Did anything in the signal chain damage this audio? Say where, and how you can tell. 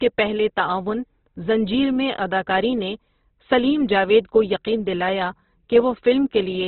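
Yes, at the codec: likely heavy Opus compression, consistent with about 12 kbps. The speech is narrowband, nothing above 4.1 kHz, and its tones sound rough, grainy and noisy throughout.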